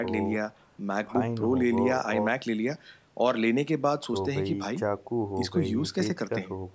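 No technical faults can be heard in this speech recording. It has passed through a call's microphone processing, which trims away the lowest bass and leaves nothing above 8 kHz, as that path normally does.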